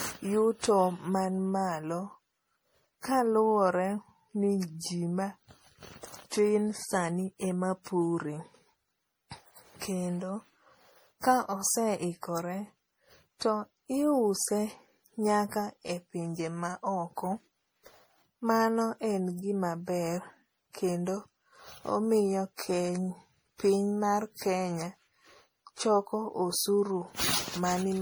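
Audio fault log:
Throughout, generation loss: the speech sounds swirly, smeared and hollow, beyond what a single lossy encode would give. Consonant attacks are blurred and soft. Watery noise and gaps in the spectrum sit under every phrase. The character fits MP3 at 64 kbit/s. The likely cause is around seven rounds of decoding and re-encoding. Each pass quantises again on a shifted frame grid, so the damage stacks up rather than staying fixed.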